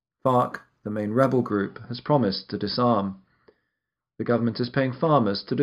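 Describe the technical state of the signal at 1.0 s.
Imaging from linear upsampling covers 0.0 to 1.5 s, including 1.0 s. Straight-line interpolation, which fits a rise from about 11 kHz to 44.1 kHz, dulls the top end and leaves faint mirrored images near 5.5 to 11 kHz, roughly 40 dB down, giving sibilants a light metallic shimmer.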